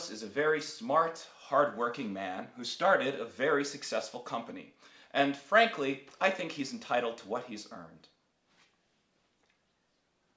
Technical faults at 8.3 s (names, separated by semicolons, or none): none